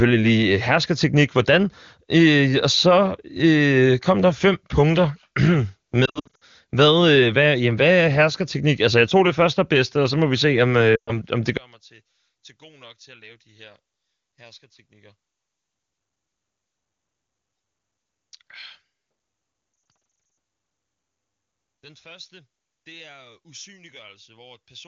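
At 6.05 s the first lost AMR speech frames appear. Gaps totalling 240 ms are scattered over 360 ms, and the longest run is 60 ms. Radio errors spoiled the frames, so the decoder repeated its last good pitch and vocal tract settings at falling gain. Each gap is a short dip or warble. The speech stutters and sounds rough.

From 10.95 to 11.18 s, after "må vi se om" and before "om det", 120 ms is lost. The sound drops to near silence, then returns weak.

From 11.57 s, just after "om det", to the end of the clip, the mono level falls by about 27 dB. Only a faint residue remains. The likely cause is one channel inverted: with one stereo side's polarity reversed, the shared centre content cancels when summed to mono.

From 19.73 to 20.37 s, more lost AMR speech frames break up this already faint sound. They total 380 ms over 640 ms, with runs up to 60 ms. The result is choppy, warbling dropouts. 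Outside the gaps, the AMR wideband (HD Voice) codec keeps speech clear, which points to a high bitrate.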